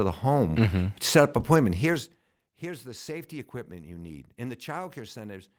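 At 1.93 to 1.95 s, a lost packet rebuilt from error correction: a single 20 ms stretch of the speech turns briefly rougher and grainier. The sound points to one missing packet whose low-bitrate backup copy, carried in the following packet, was decoded in its place. Unlike a dropout, there is no silence or click. Unlike ordinary concealment, which guesses and smears the missing stretch, it keeps its real content and only loses fine detail.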